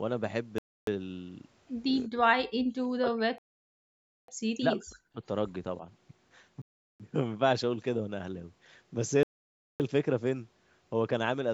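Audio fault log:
0.58–0.87 s, 3.38–4.28 s, 6.62–7.00 s, 9.23–9.80 s: Bluetooth stall. Sound cuts to silence, then resumes. Likely interference delayed packets and the headphone buffer ran empty.
2.07–5.22 s: speech suppressed in double talk. The speech dips by up to about 40 dB, about two seconds in total. The likely cause is the echo canceller turning it down with the far-end echo.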